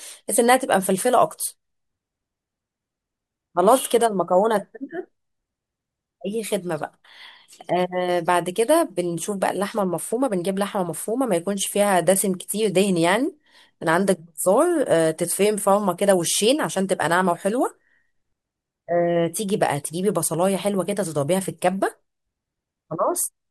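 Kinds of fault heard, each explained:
Clock slip clicks: from 0.45 s to 23.08 s, faint ticks recur roughly every 0.7 s through the speech, around thirty in all. Each is a single dropped or repeated sample, likely from two unsynchronised clocks drifting apart by around 30 parts per million.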